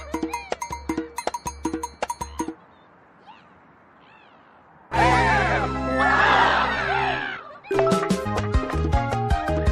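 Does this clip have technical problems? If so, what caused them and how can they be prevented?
Yes. Around 4.91 to 4.93 s there's a skip ahead: roughly a second of audio got dropped while later audio was queued, so playback jumps straight across with no gap. A bigger jitter buffer that holds late packets instead of discarding them would prevent it.

Then from 7.37 to 7.89 s a jitter buffer speed-up runs the sound at about 136% speed, same pitch, trimming short pitch-period chunks, around a fifth of a second total, to shed built-up delay. Smoothing network delay so packets don't arrive in bursts would keep the buffer from overfilling.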